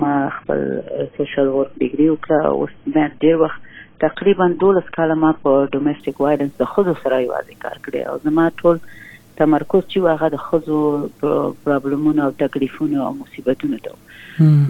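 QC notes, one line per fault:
0.0–6.0 s, adaptive stream starting at a low bitrate: nothing above 3.8 kHz and strong codec smearing, consistent with a very low-bitrate AAC version chosen for a fast start. At 6.0 s the player switches to a far richer stream, restoring treble without a gap.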